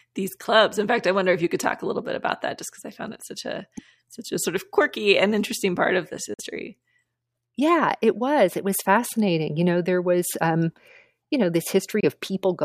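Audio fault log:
6.34 to 6.41 s and 12.00 to 12.04 s, Bluetooth dropout: the speech cuts to silence twice, then carries on as though it had kept playing underneath. The likely cause is packets on the wireless link arriving too late and being discarded, so the headphones output nothing until good data returns. The missing audio runs about 46 ms in the first gap and 23 ms in the second, which suggests two lost frames and then one.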